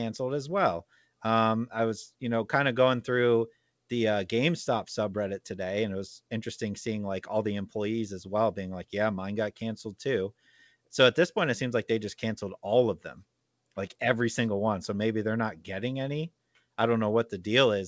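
Nothing goes wrong here at all; the speech simply comes through the call path as you'd expect, with the G.722 coding leaving nothing above 8 kHz.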